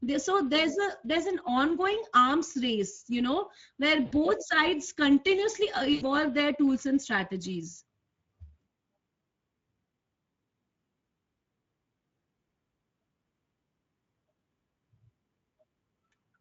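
Throughout, the speech sounds hoarse and grainy with a noisy edge. This is plainly audible Speex codec damage, consistent with a mid-quality mode around 17 kbps leaving too few bits for the excitation. From 4.05 to 4.14 s, and again from 5.93 to 6.05 s, between "continuously uh" and "their tools and strategies", the sound smears into a buzzy tone or coloured noise that fades away. That is VoIP packet loss concealed by the speech codec: the decoder stretched its last pitch and filter across gaps of 60 and 80 ms, lowering the gain frame by frame.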